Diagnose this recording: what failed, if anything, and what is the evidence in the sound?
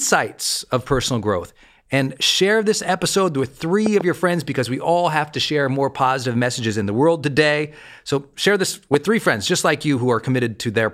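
A voltage transient, likely from a plug, switch or static discharge in the analogue wiring, was added to the signal twice, producing loud pops. At 3.86 to 4.03 s, between "share this episode with" and "your friends because we", two pops land in quick succession. At 8.94 to 8.96 s, between "share this" and "three friends just like", a single pop occurs. Both peak around 15 dB above the speech, which continues underneath each sharp thump.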